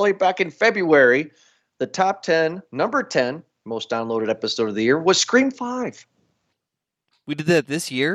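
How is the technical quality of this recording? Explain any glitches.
No glitches can be heard anywhere in the recording. The speech continues without a technical fault at any point.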